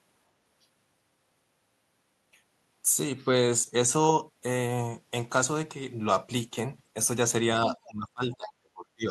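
From 7.85 s right through to the end of the recording, the speech gets pulled down hard, sinking by roughly 30 dB at its lowest, so the talker seems to duck away into near silence. That's the classic speech suppressed in double talk pattern. What likely happened is both ends talked at once, and the echo canceller couldn't tell this talker apart from the loudspeaker echo, so it squashed everything together.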